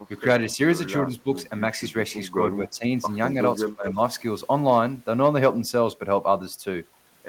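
A speech recording with two call-processing problems clustered in the first four seconds. The first is speech suppressed in double talk: the voice dips by about 10 dB for a brief moment at 1.23–1.29 s, dips again by about 10 dB at 2.57–2.84 s, then pulls down much harder, about 25 dB, at 3.69–3.98 s. The likely cause is an echo canceller that heard the far side talking at the same time and couldn't tell this talker apart from loudspeaker echo, so it ducked everything to be safe. Right at the start of that deepest dip, at 3.66–3.71 s, there's a short echo leak. A faint delayed copy of the voice, lagging by 218 ms and sitting about 15 dB under the main speech, slips through. That's likely a speakerphone on the other end whose canceller didn't fully scrub what its microphone picked up from its own loudspeaker, so a scrap of it was sent back down the line.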